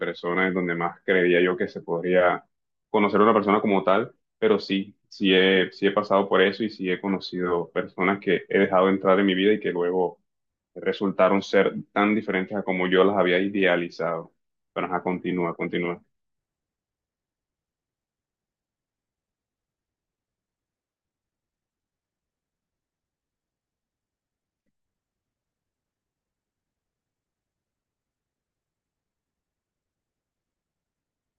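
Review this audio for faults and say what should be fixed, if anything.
Nothing here needs fixing; no technical faults turn up anywhere in the recording, so it can stay as it is.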